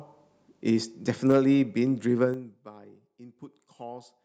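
A speech recording whose input stage misbehaves twice within about a second and a half. From 1.29 to 1.38 s the microphone's input volume was likely set too high, driving the loudest peaks roughly 2 dB past the converter's ceiling. This is microphone overload: the tops of a small share of the waveform are flattened, so that stretch takes on a harsh, crackly edge. At 1.32 s, in the middle of that distorted burst, the call software likely detected the overload and pulled the device's input volume down in a single jump of about 2 dB. That microphone volume stepped down is heard as a sudden drop in both the voice and the background rather than a gradual fade. Between 2.22 and 2.71 s a level reduction of roughly 15 dB is applied in coarse, unsmoothed increments at around a hundred steps a second, which fits an update once per 10 ms buffer. Each step leaves a tiny discontinuity, and together they form zipper noise, a fine ticking or zipping texture riding on the sound while the level falls. 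Within that ramp, at 2.34 s, the input volume is likely stepped down again by about 4 dB, adding a second abrupt level drop on top of the zippering.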